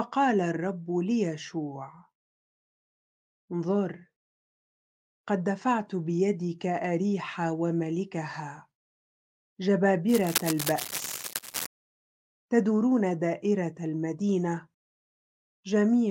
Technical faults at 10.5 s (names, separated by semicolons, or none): cable scratch noise